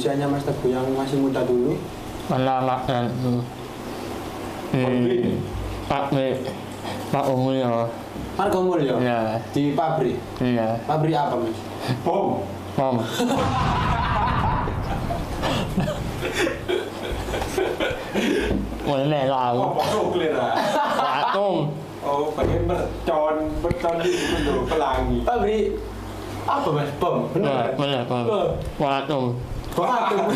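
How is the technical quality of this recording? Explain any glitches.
No glitches or technical faults can be heard here.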